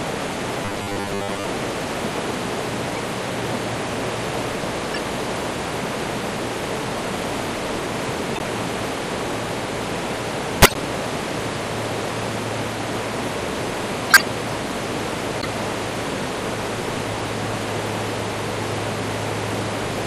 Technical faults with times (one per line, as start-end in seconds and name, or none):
0.00-20.06 MP3 compression
0.65-1.44 robotic sound from repeated short buffers
10.62-10.76 corrupt frame decoded